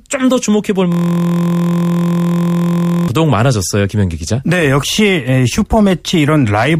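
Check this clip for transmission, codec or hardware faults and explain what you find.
One fault, a system hang loop. From 0.92 to 3.08 s the speech gives way to a steady, mechanical buzz pitched at about 43 Hz. A 23.22 ms fragment of audio repeats exactly, over and over, at a rate of 43.1 Hz. The computer or its audio driver stalled while the sound hardware kept replaying the same ring buffer, which fits a 1024-sample buffer. The loop is short enough to fuse into a tone rather than a stutter.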